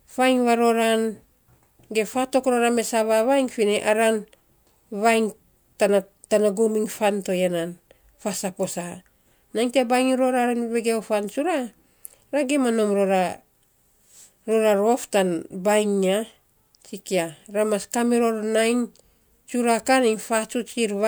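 Across the whole speech recording, no technical fault can be heard in the signal.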